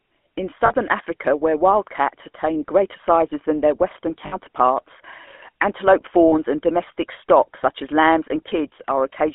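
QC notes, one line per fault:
throughout – GSM full-rate codec: buzzy, gravelly roughness from pulse-excited vocal-tract coding, consistent with 13 kbps full rate; band limited to roughly 250 Hz–3.4 kHz.
0.66–0.71 s, 4.26–4.34 s, 6.28–6.34 s – lost GSM frames: brief metallic ring lasting 40, 60 and 40 ms, where the last good frame is repeated. The second comes right after "sizes than their western", and the third ends just before "and domestic stock such". The lengths fit two or three missing 20 ms frames.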